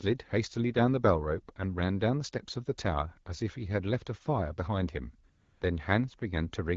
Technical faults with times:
5.29-5.61 AMR comfort noise

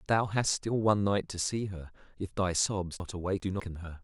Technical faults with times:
3.00-3.60 chunks out of order

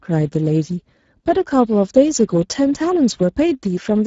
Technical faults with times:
0.00-4.06 Speex codec

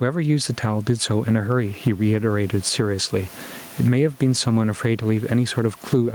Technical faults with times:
0.00-6.14 gain pumping

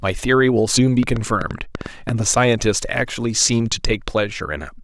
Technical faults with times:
1.03-2.10 train of clicks

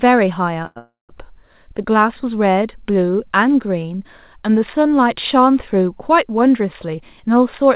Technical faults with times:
0.66-0.78 short stall from a late packet
0.78-1.11 call audio freeze
6.43-7.67 jitter buffer speed-up

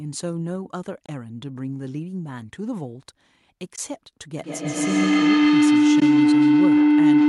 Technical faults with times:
1.05-1.09 AAC frame loss with muting
3.75-3.78 AAC frame loss with muting
4.38-7.28 feedback howl
6.00-6.02 AAC frame loss with muting

